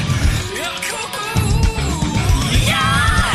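A skip ahead at 1.13 to 1.15 s: a stretch of audio was dropped in transit or discarded by an overflowing jitter buffer while later audio was already queued. Playback jumps forward, losing roughly seven tenths of a second, with the two sides spliced almost directly and no filled gap.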